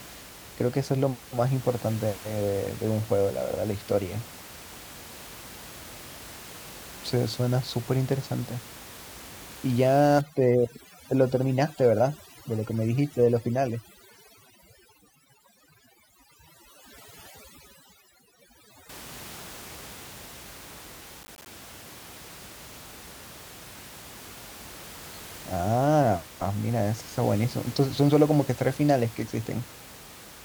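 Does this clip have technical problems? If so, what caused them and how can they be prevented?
Yes. From 10.21 to 18.89 s, overdone noise removal strips away bands near the estimated noise floor. On the spectrogram this shows as a blank background dotted with isolated specks. Set reduction gently, or record with less room noise, which here sits about 19 dB below the speech.

From 21.21 to 21.46 s, processor overload crackle occurs as repeated missed deadlines leave tiny silent gaps. The waveform shows hard-edged holes, which fits roughly ten missed buffers of around 10 ms each. Prevent it with larger buffers or less competing processor load.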